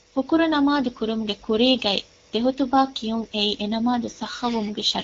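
From 4.48 s to the end at 5.03 s there is an AMR rate drop: the link falls back to a leaner coding mode, and the speech turns rougher and more synthetic, with a raspy edge the earlier wideband sound lacked. The change points to a step from 12.65 down to 8.85 kbit/s. Unlike a bandwidth switch or a dropout, the audio band stays just as wide and there is no gap, only coarser texture.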